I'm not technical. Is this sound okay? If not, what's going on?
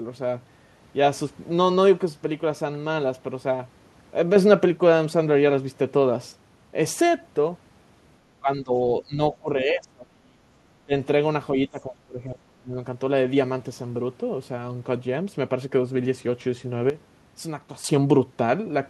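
No. There are two problems.

Sudden gain jump, 4.36 to 6.32 s and 16.9 to 17.84 s: the speech and the background noise jump abruptly together, louder in the first stretch and much quieter in the second. A volume setting was likely switched instantly instead of being eased in gradually.

Speech suppressed in double talk, 8.4 to 8.79 s, 9.02 to 10.4 s, 10.86 to 10.92 s and 11.68 to 12.77 s: the voice suddenly sinks, sometimes almost to nothing, then returns. This likely happened because both people spoke at once and the call's echo remover mistook this voice for echo and turned it down.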